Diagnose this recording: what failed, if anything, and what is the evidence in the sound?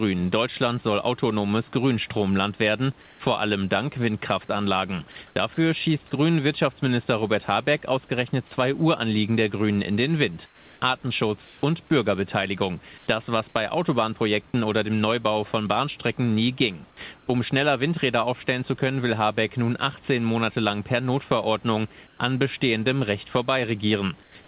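Call processing, likely discontinuous transmission: in the pauses, the real room background, about 30 dB below the loud speech, gives way to comfort noise in place of the background at 3.02, 5.27, 10.46, 11.45, 12.98, 17.18, 22.07 and 24.23 s, each stretch 90 to 360 ms long. The texture turns steady and featureless. The level mostly drops a few dB, about 7 dB at 24.23 s, but rises about 5 dB at 5.27 s.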